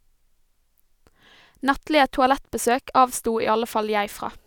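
No technical faults can be heard anywhere in the recording.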